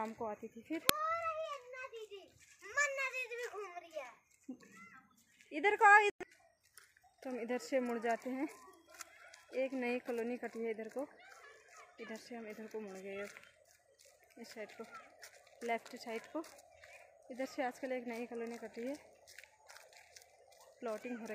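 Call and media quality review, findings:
Uninitialised buffer at 0.89 s: playback pulled one block before any audio had been written into it, so stale memory contents went out as samples. Heard as a single sharp crack, loud against the surrounding sound. Lasts about 2.67 ms, which fits a 128-sample buffer. Probable component: the output buffer handoff, where a read ran ahead of the write.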